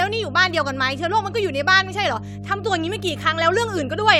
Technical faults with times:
0.00-4.19 mains hum

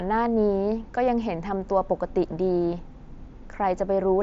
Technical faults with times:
none

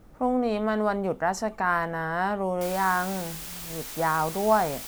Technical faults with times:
2.61-4.88 low bit depth with dither

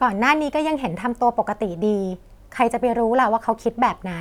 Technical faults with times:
none

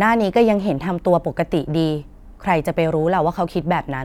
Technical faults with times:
none

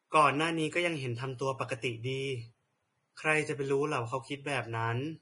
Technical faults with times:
0.00-5.21 Vorbis compression

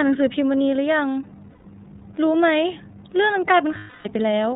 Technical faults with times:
0.00-4.56 iLBC codec
1.49-1.66 lost iLBC frames
3.77-4.08 lost iLBC frames

